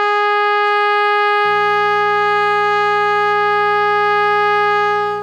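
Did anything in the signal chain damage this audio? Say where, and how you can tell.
Yes. From 1.45 s to the end of the music a steady, raspy buzz sits underneath everything, roughly 25 dB below the signal. This is mains buzz picked up in the analogue wiring. Its fundamental is 60 Hz, but its harmonics stretch up into the kilohertz range, which gives it that edgy, rasping quality rather than a smooth hum. Sharp switching spikes, twice per mains cycle, from something like a dimmer, rectifier or unshielded cable are leaking into the audio path.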